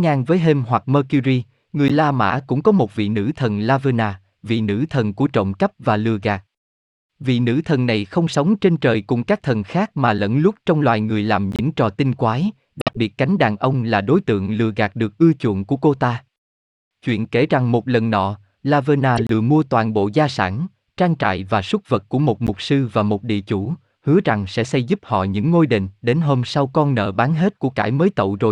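Corrupt frames are decoded at 1.88–1.91, 8.33–8.35, 11.52–11.60, 12.80–12.96, 19.17–19.30 and 22.47–22.49 s. Damaged bits misplace energy across the speech spectrum. Each event is a brief chirp or noise burst spanning one to several frames, some peaking around -5 dBFS.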